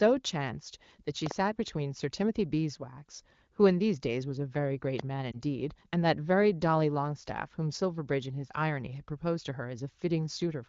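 A loud pop at 5.00 to 5.02 s stands roughly 15 dB above the speech, a single sharp transient, likely a voltage glitch from a switch, plug or static discharge. Lost AMR speech frames follow at 5.32 to 5.38 s: a brief dip and warble where the wideband decoder concealed a corrupted frame, consistent with one 20 ms frame dropped over the radio link. Around it, the AMR-WB coding sounds clean, which fits a rate near 15.85 kbit/s.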